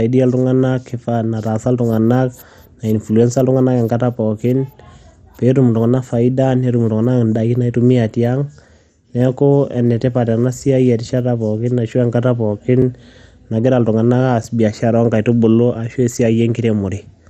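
Throughout the speech, the top end is dull and nothing reaches above 15 kHz, with a gurgling, granular roughness on the voice that is plainly audible. This is likely MP2 compression at a rate around 64 kbps, where upper sub-bands switch on and off and the remainder is coarsely quantised. That flickering, warbling texture sets it apart from a simple low-pass filter, which would only dull the sound.

At 12.82 s and again at 14.43 s, there is a block of digital silence: the signal drops straight to silence for about 4 ms and then 5.5 ms, then returns with no fade. Each is heard as a tick or dip rather than an audible hole. Unlike a dropout that fades or a crackle added on top, the sound itself briefly vanishes.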